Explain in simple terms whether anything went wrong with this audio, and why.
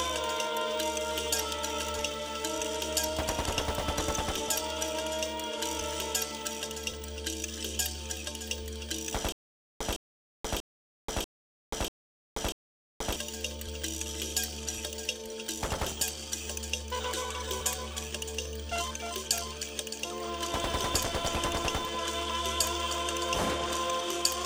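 Between 9.32 and 13.16 seconds the audio goes wrong with a stutter with silent gaps. The same 0.16-second snippet plays six times, each followed by about half a second of dead silence, so it ticks along evenly every 0.64 seconds. The player most likely stalled, replaying its last bit of sound at each retry. Unlike a simple dropout, the gaps are filled by a repeating fragment, and the real audio from that stretch is lost.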